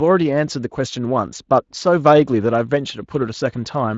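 No technical faults can be heard in this speech.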